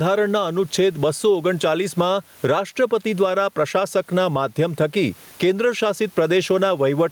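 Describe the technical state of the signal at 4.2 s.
At 4.2 s the speech shows gain pumping, which runs through the whole clip rather than only at this moment. The room noise sits about 37 dB below the speech, with the level swinging by around 10 dB. The likely cause is gain set far too high with a fast limiter clamping it down. Unlike a noise gate, the background never cuts to silence, and the speech sounds squashed.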